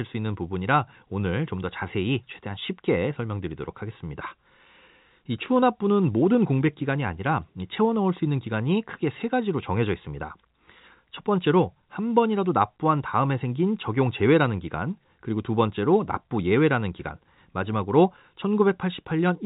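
No faults are audible in this speech clip, which carries the band-limited character of G.711 telephone coding with nothing above about 3.8 kHz.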